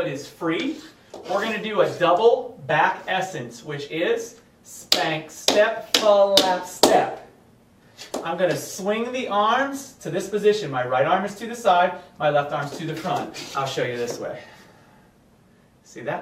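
Nothing stood out on listening to this recording as a technical fault at any point.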